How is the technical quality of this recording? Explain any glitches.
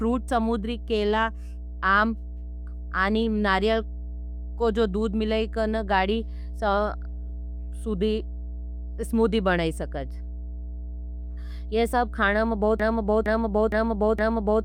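The recording has two clear faults: a steady hum under the whole clip and a stuck repeat at the end.

Mains hum, throughout: power-line interference at 60 Hz leaks into the signal, leaving a constant low drone that sits fairly loud, not far beneath the speech.

Broken-record loop, 12.80 s to the end: the stream likely stalled and resent its last fragment, so one 463 ms piece repeats four times back to back, and the remaining speech is lost.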